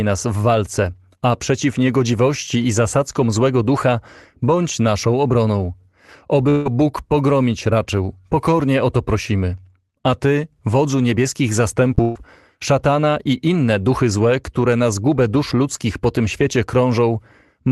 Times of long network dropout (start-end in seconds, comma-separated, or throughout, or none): 6.49-6.67